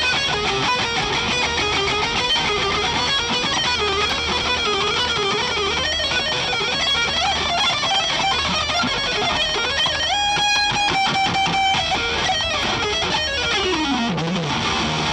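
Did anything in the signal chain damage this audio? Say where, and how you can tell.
Yes. The damage happens at the driver or buffer stage, as chunks out of order. Four times, at 0.34 to 1.02 s, 3.76 to 4.44 s, 8.88 to 9.56 s and 11.95 to 12.63 s, the sound jumbles briefly. Each event spans two 341 ms chunks. One chunk arrives one slot late and plays after its successor. Nothing goes missing. The swapped order creates three abrupt joins.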